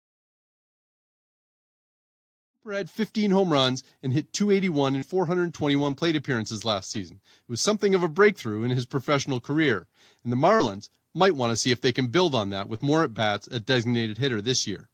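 After the smooth fade-in settles at about 3.1 s, the speech from 4.98 to 12.81 s has scattered short gaps: about three packets lost or arriving late, around 120 ms of audio missing in all, none longer than roughly 40 ms. The receiver covered each hole by extending the sound just before it, across about 200 ms, so you hear brief ticks, smears and hiccups rather than silence. A single long dropout would instead leave one clear break.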